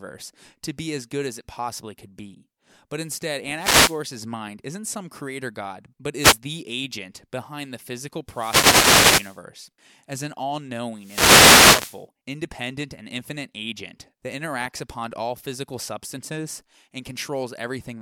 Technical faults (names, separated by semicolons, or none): wireless microphone noise hit